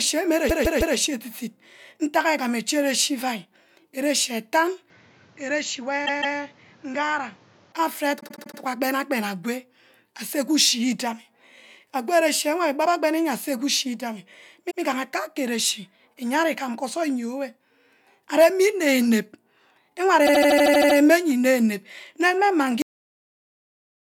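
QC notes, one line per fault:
0.49 to 0.96 s, 6.05 to 6.36 s, 8.19 to 8.58 s, 14.70 to 14.80 s and 20.26 to 20.97 s, repeated frames: a short block gets played again one or more times in a row, so the sound stutters. The block is about 157 ms at the first two spots (3 and 2 extra plays), about 78 ms at 8.19 s (5 extra) and 20.26 s (9 extra), and about 105 ms at 14.70 s (1 extra). Together they add roughly two seconds.
4.9 to 7.72 s, input switched to a poorer device: the sound turns duller with no gap at the change. Nothing gets through above 7.6 kHz, the level drops about 5 dB, and a new noise floor sits about 30 dB under the signal. That narrower band, lower level and different noise are what you'd get if the system likely jumped to another mic or a headset's call profile partway through. The repeat at 6.05 s lands inside this stretch.
22.82 s, cut-off end: the audio stops dead in the middle of a sound and drops straight to digital silence with no natural decay. 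That's what happens when the final buffers never get written, so whatever was still in progress is simply chopped. The silence runs on from there to the end of the file.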